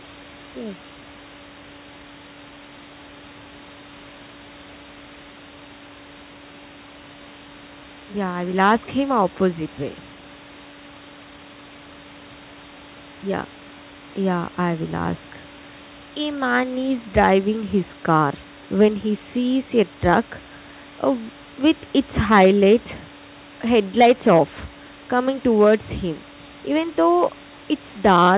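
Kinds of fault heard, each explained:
No faults can be heard in this speech recording.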